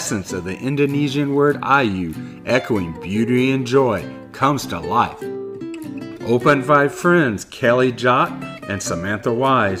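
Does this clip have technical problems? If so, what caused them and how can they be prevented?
No, no technical faults here.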